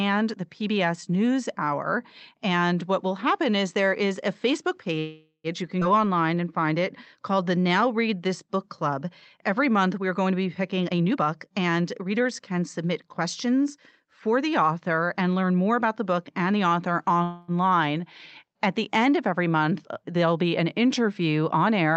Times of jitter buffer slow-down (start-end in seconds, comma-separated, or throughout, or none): 6.01-6.80, 7.31-7.69